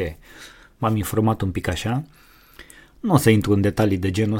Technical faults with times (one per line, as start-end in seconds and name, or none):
none